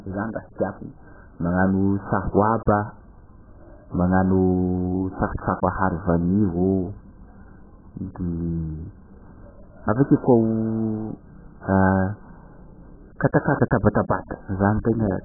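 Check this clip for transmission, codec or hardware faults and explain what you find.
One codec fault runs through the whole clip. AAC compression, throughout: nothing remains above 1.8 kHz and the speech sounds dull, warbling and smeared, likely from AAC-LC starved at a very low bitrate.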